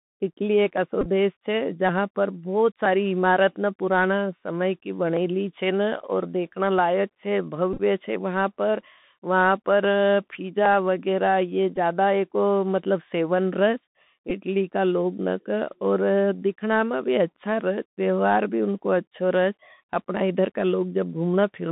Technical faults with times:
0.00-21.72 Bluetooth CVSD headset codec
0.77 dropped samples
1.01-1.07 Bluetooth headset packet repeated
2.86 dropped samples
5.17 dropped samples
7.73-7.81 Bluetooth headset packet repeated
10.66 dropped samples
11.76-11.78 Bluetooth headset packet repeated
14.30 Bluetooth headset packet repeated

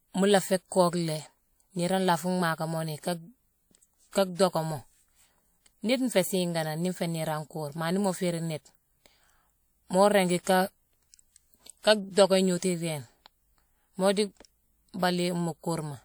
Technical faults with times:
10.43-10.47 pre-echo

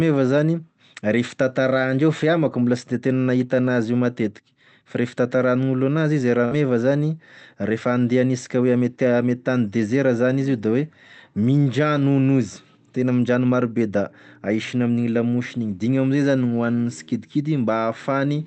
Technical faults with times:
6.45-6.54 burst of packet loss

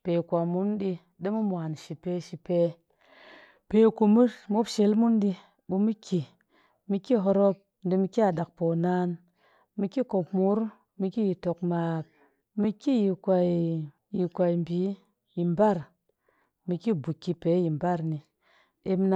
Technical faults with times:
7.07 underrun with held sample
12.64 underrun with held sample
15.83 underrun with held sample

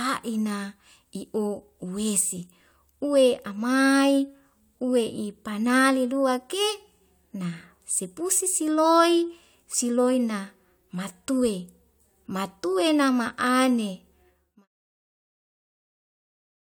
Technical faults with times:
none

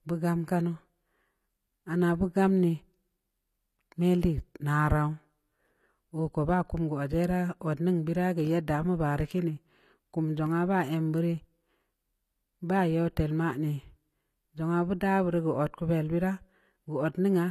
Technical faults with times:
0.00-17.51 HE-AAC compression

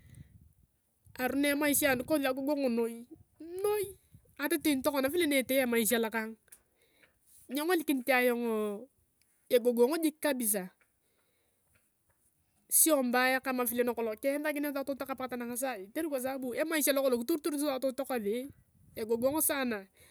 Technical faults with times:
none

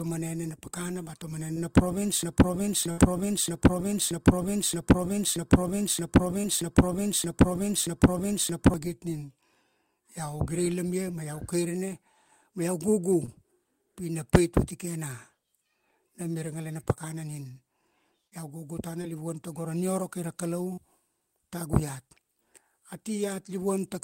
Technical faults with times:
1.53-1.61 short concealed packet loss
2.23-8.74 broken-record loop
2.91-2.99 burst of packet loss
6.41-6.45 short concealed packet loss
13.25-13.29 short concealed packet loss
18.27-18.33 short concealed packet loss
19.01-19.05 short concealed packet loss
20.73-20.79 short concealed packet loss

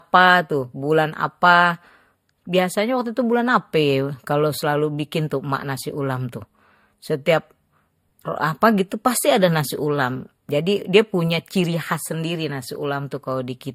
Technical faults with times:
0.00-13.75 transcoding between lossy codecs

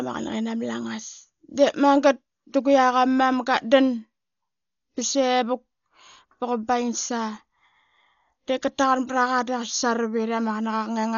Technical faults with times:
0.00-11.18 Dolby Digital compression

